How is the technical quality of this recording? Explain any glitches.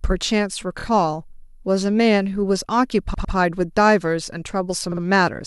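The recording has three short stutters from repeated frames. At 0.79 s, a 26 ms block plays twice more; at 3.14 s, a 104.5 ms block (fits four frames) repeats twice; at 4.91 s, a 52 ms block likewise. Re-decoded duplicate data gives stutters: identical waveform chunks side by side, vertical seams on a spectrogram.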